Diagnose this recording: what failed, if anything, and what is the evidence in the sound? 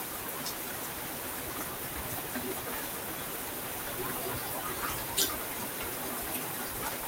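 Nothing failed at any stage of the chain: the signal stays continuous and intact throughout, with no dropouts, distortion, level jumps or timing disturbances to indicate trouble in the wiring, conversion, buffering, processing, transmission, storage or playback.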